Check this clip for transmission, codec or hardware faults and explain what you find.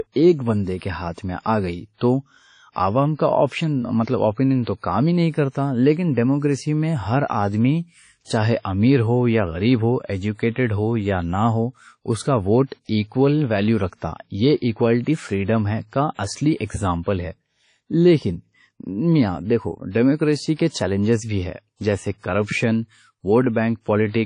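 There's one problem, and it runs through the whole clip: WMA compression, most likely. The speech carries plainly audible codec damage, with a ringing, washy quality and a hiss that swells and fades along with the talker. That's what you get when a transform codec with long blocks smears its quantisation noise over tens of milliseconds and drops weak spectral lines. There's nothing above 10.1 kHz, which fits a low bitrate around 32 kbps.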